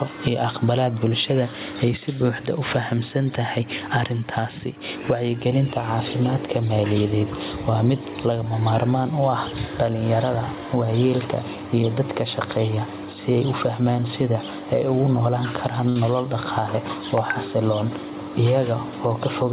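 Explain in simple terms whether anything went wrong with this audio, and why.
Gain pumping runs through the whole clip. The likely cause is the microphone gain being set far too high, with a fast limiter pulling it back down on each loud moment. The swing is large, and loud and quiet parts end up squashed together.

At 15.89 s there is a short stall from a late packet. A piece of audio arrived too late, and the receiver briefly ran out of sound to play. It filled the gap by stretching the last sound for about 65 ms, until 15.99 s, and then carried on from the same point. Nothing is lost, but that moment is held slightly too long and may buzz or dip. The call line itself carries nothing above 4 kHz, which gives the narrow telephone sound.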